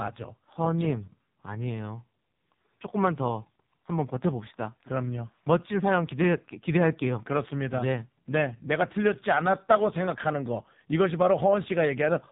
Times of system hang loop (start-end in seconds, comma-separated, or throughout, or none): none